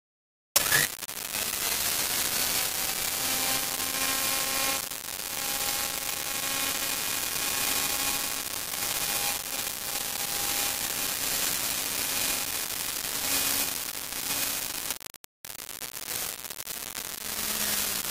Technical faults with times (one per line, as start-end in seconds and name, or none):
0.00-18.10 low bit depth without dither